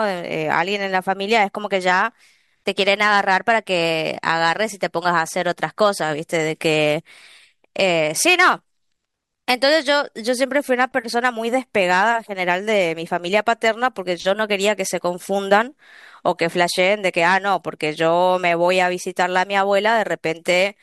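Speech recording; no technical faults can be heard.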